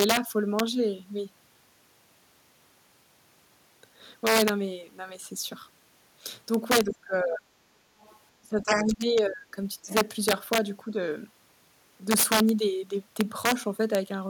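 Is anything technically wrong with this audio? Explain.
Yes. Three faults can be heard in this speech recording.

Integer overflow runs through the whole clip. On the loudest syllables the sound breaks into harsh, violent cracks, much sharper than ordinary clipping. The signal was pushed about 9 dB past full scale. Instead of being held at the ceiling, the peaks that overshot wrapped around to the opposite extreme. Only a small fraction of samples cross the limit, so the cracks land on peaks.

Speech suppressed in double talk appears at 6.84–7.57 s, 8.41–9.57 s, 9.82–9.9 s and 10.91–10.96 s. In these spans the talker's voice sinks, thins or drops out in pieces. The deepest dip is around 30 dB in the first span and around 20 dB in the second, with shallow ducks of roughly 10 and 5 dB afterward. The likely cause is an echo canceller that could not tell the talker apart from the far-end echo while both spoke, so it turned everything down.

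Other side's voice leaking through shows up as brief scraps of a second voice. These come at 6.88–6.94 s, 8.0–8.16 s and 9.89–9.94 s, sitting roughly 15, 35 and 25 dB below the main speech. This is likely loudspeaker playback picked up by the microphone that the echo canceller failed to fully remove. The first and third leaks overlap the suppressed stretches, which fits both sides talking at once.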